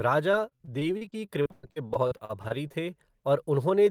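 From 0.31 s to 2.76 s the speech suffers repeated packet loss, producing the familiar robotic sound. Packets go missing or arrive too late in rapid succession, 23 times across this stretch, with the longest hole near 118 ms. The receiver covers each gap by extending the preceding sound, so about a quarter of the span is synthetic continuation. Other audio is simply absent, leaving choppy speech with fragments dropped out.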